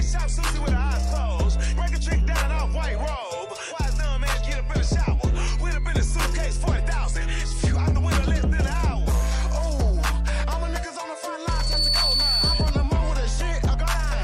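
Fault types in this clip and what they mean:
Loudspeaker feedback squeal: a 4.5 kHz tone swells within about a third of a second into a piercing squeal around signal level; spectrogram shows one bright horizontal line.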